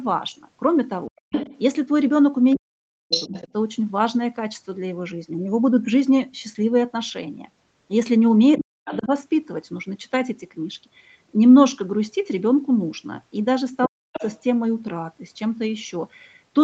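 A speech recording over a call, band-limited to 8 kHz by the Opus path, with speech suppressed in double talk at 1.08–1.16, 2.55–3.33, 8.58–9.11 and 13.87–14.14 s. The talker drops by roughly 40 dB, likely because the echo canceller muted both sides, leaving near-empty gaps in the spectrogram. The other side's voice leaks through at 1.19–1.58, 3.10–3.44, 8.58–9.05 and 14.13–14.40 s, likely from residual loudspeaker echo. This appears as harmonic traces, only slightly below the talker in the first two and much quieter in the last two.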